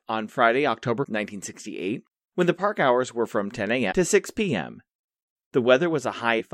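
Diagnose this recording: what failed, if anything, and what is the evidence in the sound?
The codec stage failed: damaged data in the compressed stream produces brief disruptions at 1.02–1.05, 3.90–3.93 and 6.39–6.41 s, each about 24 ms. The decoder misreads corrupt frames and resynchronises at the next frame header.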